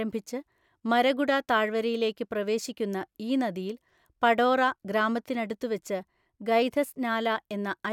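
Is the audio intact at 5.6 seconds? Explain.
Yes, the speech at 5.6 seconds is intact, with no audible fault at that moment.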